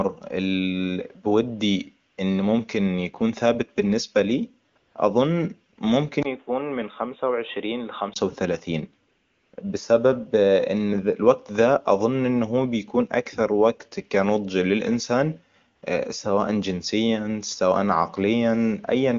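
AMR comfort noise appears at 2.09–2.17, 4.69–4.75, 4.77–4.95 and 5.73–5.77 s. In these gaps the phone judged the sound silent, stopped sending speech frames, and the receiver substituted a smooth synthetic hiss for the real background.

From 6.23 to 8.16 s the input likely switched to a poorer device. After a 20 ms dropout the sound goes dull, with nothing above 3.8 kHz, a level drop of about 5 dB and a new background hiss well below the signal.

AMR comfort noise returns at 9.07–9.53, 9.55–9.57 and 15.75–15.81 s. The longest gap, about half a second, replaces the background with steady synthetic noise.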